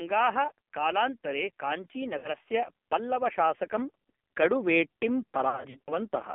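The speech in this clip has passed through the AMR narrowband mobile codec (AMR-NB) running at a very low bitrate, one that fits roughly 6 kbps. The codec rebuilds the voice from a vocal tract model and a handful of excitation pulses per subframe. At this rate there are too few bits to describe that excitation well, so the voice comes out heavily damaged, buzzy and synthetic. The line also confines everything to about 200 Hz to 3.4 kHz, leaving a thin, boxy telephone sound with nothing at all above 4 kHz.

Over nearly the whole clip, from 0.05 s to 6.1 s, automatic gain rising is at work. The gain control judged the incoming level too low and kept pushing its gain up, by about 11 dB in total. Because it acts on the whole signal, the voice and whatever sits behind it swell louder together as the clip goes on, a slow climb and not a sudden jump.

Lost AMR speech frames break up the sound twice. 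Radio errors corrupted frames so they failed their checks, and the decoder filled each gap by reusing the last good pitch and vocal tract settings at falling gain. From 2.18 s to 2.30 s, about 60 ms goes missing, which fits three 20 ms frames. That comes out as a short smeared, sagging patch before the voice returns a little rough. From 5.50 s to 5.98 s, about 200 ms is lost, scattered across 360 ms in runs no longer than 40 ms, so the speech stutters through a string of brief dips and warbles.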